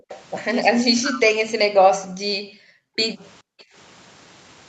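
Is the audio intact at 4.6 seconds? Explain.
Yes, at 4.6 seconds the speech is intact, with no dropout, glitch or other fault at that moment.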